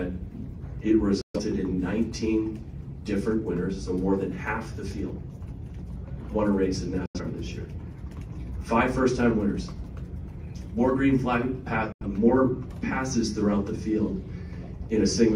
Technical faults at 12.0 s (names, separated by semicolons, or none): digital broadcast dropout